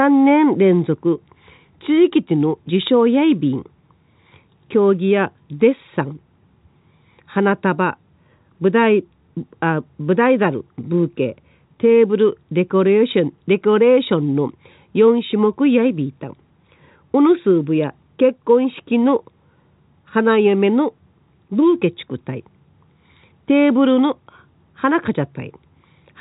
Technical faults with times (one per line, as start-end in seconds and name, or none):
none